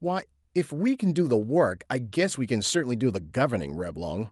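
No technical faults can be heard anywhere in the recording.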